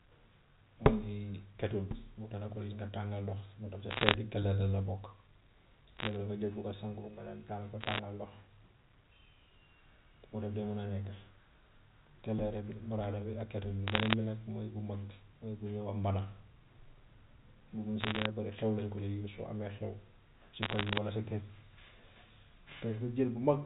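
A speech recording over a G.711 A-law telephone path has six brief bursts of crackle, caused by bit errors on a digital phone line. They occur at 3.90–4.14, 5.97–6.16, 7.81–7.99, 13.88–14.14 (just before "bi nag"), 18.01–18.26 and 20.62–20.98 s. Each flipped bit corrupts a single sample, and hits on sign or high-order bits produce sharp ticks over the unaltered speech. The error rate in each burst is well under one percent.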